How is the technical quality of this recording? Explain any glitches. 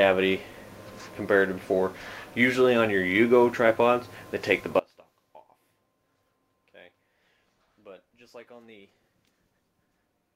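The recording has one clear fault. At 4.80 s the sound abruptly drops to a faint residue about 25 dB down, staying until the end: an audio dropout, likely a lost signal with the path still live.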